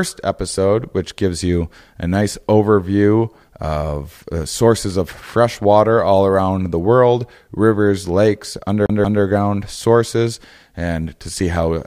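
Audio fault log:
8.86–9.23 s, CD stuck on one turn. The speech catches on a single short slice of sound, about 180 ms long, and plays it twice in a row. Each jump back leaves a brief mute before the slice repeats. This is the laser falling back one track at the same damaged spot as the disc turns. The result is a quick, even stutter, the typical sound of a skipping CD, before playback moves on.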